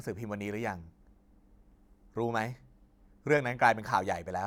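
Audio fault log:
No faults found in the speech recording.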